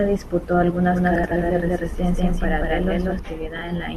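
Speech, carrying two distinct faults. From 0.91 s to 3.19 s a doubled audio track is audible. A second, full-band copy of the speech runs roughly a fifth of a second behind the first at about the same level, with no decay or room colour. It cuts in and drops out abruptly at those times rather than fading like a reflection. The likely cause is the signal being captured twice through a slower parallel path, or an edit leaving two copies out of step. Frames out of order occur twice. From 1.16 s to 1.32 s a short stretch plays with its two halves swapped, each about 78 ms long, which points to runs of three codec frames exchanged. From 3.56 s to 3.62 s the same happens on a smaller scale, with halves of about 26 ms, consistent with single frames swapped. Both sound like a brief garbled flutter, and no time is lost overall.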